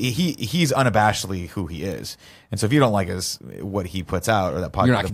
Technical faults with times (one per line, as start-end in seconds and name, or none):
none